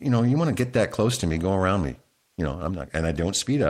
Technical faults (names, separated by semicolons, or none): none